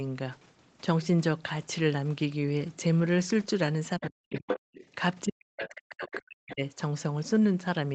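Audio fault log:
3.99–4.45 s and 5.24–6.77 s, speech suppressed in double talk: with both ends talking at once, the echo canceller likely could not tell the near talker from the loudspeaker echo, so it pulled everything down. The voice sinks by as much as some 40 dB, for about a third of a second in the first stretch and close to a second and a half in the second.
4.01–4.07 s, 4.30–4.84 s, 5.62–5.68 s and 6.06–6.19 s, other side's voice leaking through: the far talker, played on the device's loudspeaker, likely was not fully cancelled from the microphone, so a second voice slips into the recording. The first scrap sits far below the talker, around 20 dB down. The half-second stretch from 4.30 s is nearly as loud as the talker. The two short bursts after 5.6 s fall in between, roughly 15 dB down.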